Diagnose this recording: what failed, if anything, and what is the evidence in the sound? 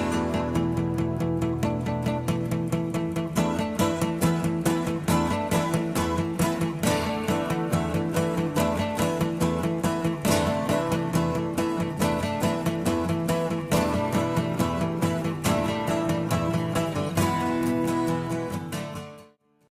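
Nothing has failed at any stage of the chain, and the sound carries no audible evidence of a technical fault anywhere in the recording.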